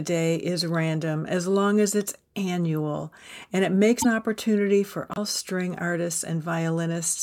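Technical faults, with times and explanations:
4.01–4.06 s and 5.14–5.18 s, broken MP3 bit reservoir: roughly 40 ms glitches after "it's annual and it" and "opportunity for", likely from decoding another frame's borrowed bytes; the waveform jumps discontinuously.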